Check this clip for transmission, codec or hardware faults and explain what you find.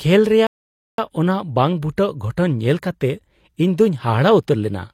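There is one fault, a rebuffering stall. It begins at 0.47 s and ends at 0.98 s. The speech halts and the clip falls silent for about half a second, 0.51 s in all. The player had used up the audio it had downloaded. It paused until more data arrived. Playback then picks up at the exact point where it stopped. No speech is skipped or repeated. The gap adds time to the clip.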